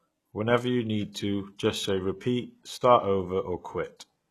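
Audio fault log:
Throughout, HE-AAC compression: the speech carries plainly audible codec damage, with nothing at all above about 12.3 kHz, and the upper band has a bright but synthetic, metallic and lispy edge on sibilants. This is likely spectral band replication, where only the lower spectrum is truly coded and the treble is rebuilt by copying lower bands upward under a coarse envelope, so its harmonics fail to line up, which fits a low bitrate around 16 kbps.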